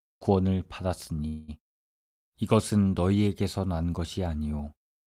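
At 1.27 s the speech stalls in a call audio freeze lasting until 1.50 s. The last sound is stretched into a fading buzz or hiss for about 207 ms, likely because delayed packets drained the jitter buffer. It then resumes where it stopped, nothing lost, just running 207 ms late.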